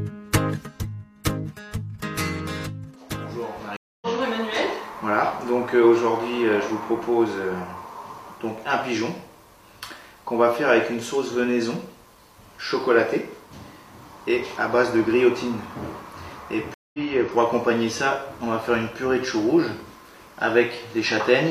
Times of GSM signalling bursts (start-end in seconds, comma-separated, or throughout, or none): none